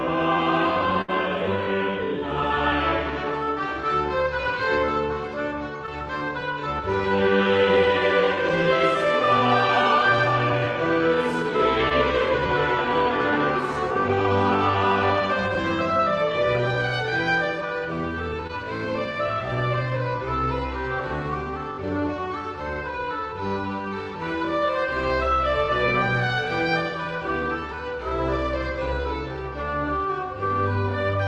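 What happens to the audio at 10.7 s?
Nothing goes wrong at 10.7 s: the audio passes through intact there, carried normally over the WebRTC call path.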